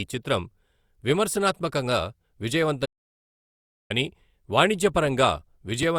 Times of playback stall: 2.85-3.91

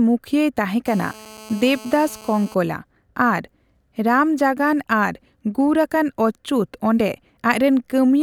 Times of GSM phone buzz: 0.87-2.55

